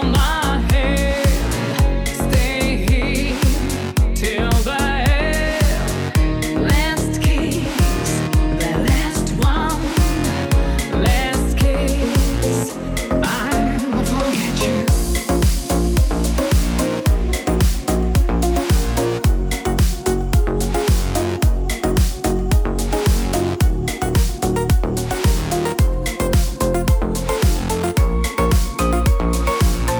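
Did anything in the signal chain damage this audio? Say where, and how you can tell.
No, nothing in this audio stood out as damage from any stage of the signal chain.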